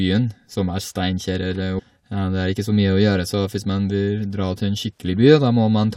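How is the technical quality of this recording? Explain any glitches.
The recording has one glitch, a brief disturbance early in the speech.

Damaged data in a compressed stream, from 1.78 to 1.80 s: a short stretch of the encoded file carries corrupted bytes, so the decoder cannot read the frame there correctly, loses its place in the bitstream and has to hunt for the next valid frame header before normal playback resumes. In this clip that failure is heard as a quick blip lasting about 20 ms, cutting abruptly across the speech.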